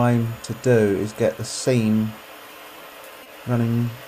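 At 3.23 to 3.27 s, short concealed packet loss: about 20 ms never arrived and was extrapolated from preceding sound, heard as a brief smear, showing as smoothed, repeated spectral texture.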